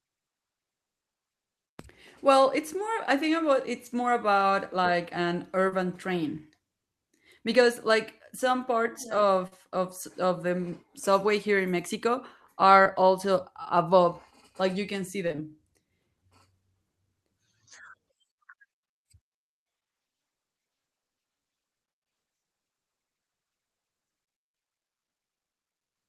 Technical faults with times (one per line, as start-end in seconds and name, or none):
1.81-1.85 short concealed packet loss
5.69-5.73 short concealed packet loss
9.47-9.53 short concealed packet loss
12.83-12.87 short concealed packet loss
15.27-15.40 short concealed packet loss
23.26-23.29 short concealed packet loss